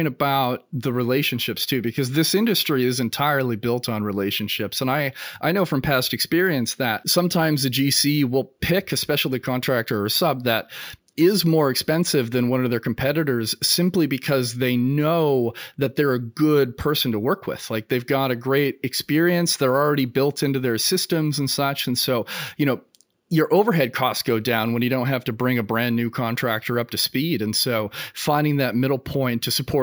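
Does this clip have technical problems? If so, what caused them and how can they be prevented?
Yes. Imaging from sample-and-hold upsampling runs throughout: each sample was just repeated, fitting a step from 16 kHz to 48 kHz, so a mirrored spectrum copy sits at 8 to 16 kHz, about 15 dB down, as a metallic fizz tracking the speech. Resample with a proper interpolating low-pass filter instead.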